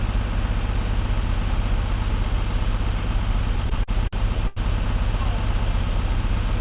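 From 3.56 to 4.59 s the sound drags and stutters. These are repeated stalls, where the jitter buffer ran dry eight times as packets arrived late. At each stall the receiver stretched the last sound to fill the wait. About 225 ms was filled this way, roughly a fifth of that second. The longest hold was 89 ms, and no sound was lost. On a waveform the stalls appear as short repeated or sustained stretches, faded in the longer waits. On a spectrogram, already empty above 4 kHz from the call codec, they show as smeared horizontal bands.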